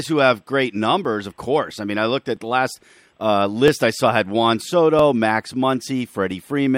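Clock drift buffer slips, 1.05 to 6.31 s: about five regular clicks every 1.32 s, likely two mismatched clocks dropping or repeating a few tens of samples.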